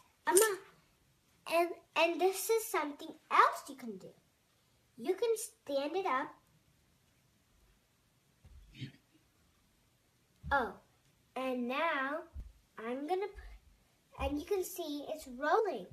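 At 5.04 to 5.06 s, 12.38 to 12.42 s and 15.58 to 15.60 s the sound jumps forward, losing about 50 ms, about 70 ms and about a tenth of a second of material. These are compressed frames skipped: whole coded frames never reached the output, so playback resumes further along. Unlike a dropout, there is no gap of silence.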